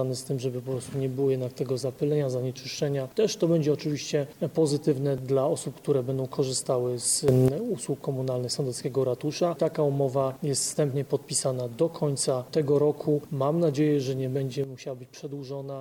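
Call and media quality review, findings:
Sudden gain jump, 7.28–7.48 s: sound and noise floor step up together by about 11 dB, then drop back. Likely an unramped digital gain change in the processing chain, applied sample-to-sample.

Sudden gain jump, 14.64 s to end: sound and background drop together by about 9 dB and stay down. Likely the same mechanism, a gain step with no fade.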